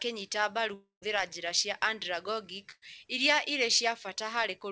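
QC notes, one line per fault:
0.74–1.04 s, long network dropout: Incoming audio likely stopped for about 0.3 s, so the receiver stretched the last sound into a fading tail and then about 140 ms of near-silence. Speech returns at "njĩra cia" with roughly 280 ms of audio missing.
2.72–2.84 s, burst of packet loss: A run of packets, about 100 ms of audio, never arrived in time. Concealment held the preceding sound and faded it out, leaving a brief fading fill before speech resumes at "iria irĩ", with that stretch lost.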